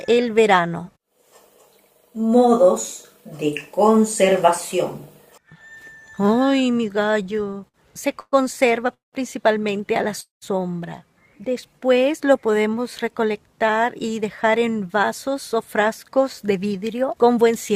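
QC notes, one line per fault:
7.11–7.76 s, repeated stalls (stutter): eight short gaps, the longest 59 ms, fill about 135 ms, roughly a fifth of the span. Packets kept arriving late, so the jitter buffer repeatedly ran dry and the receiver stretched the last sound each time. Nothing is lost, but the audio drags and stutters.
8.20–8.34 s, 8.94–9.15 s and 10.21–10.44 s, call audio freeze: pauses of 122 ms, 186 ms and 210 ms, each a fading continuation of the previous sound and then silence (40 ms, 150 ms and 140 ms). The likely cause is delayed packets emptying the buffer. Playback resumes where it stopped, adding delay without losing audio.
11.50–13.33 s, jitter buffer slow-down: the audio plays at about 92% speed with unchanged pitch, stretching the passage by 144 ms. To rebuild a reserve, the receiver repeated single pitch periods and fragments of pauses many times, so sounds are drawn out.
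15.02–17.71 s, jitter buffer speed-up: the audio runs at about 106% speed with unchanged pitch, losing roughly a fifth of a second overall. With too much audio buffered, the receiver cut many short pitch-period pieces to reduce delay, so this stretch sounds hurried.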